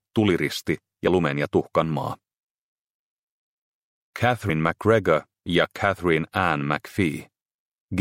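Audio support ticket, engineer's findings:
Brief smeared blips at 1.06 s and 4.48 s, audio jumping ahead about 30 ms and 50 ms. Compressed frames skipped: one and two frames lost, fitting 26.1 ms frames.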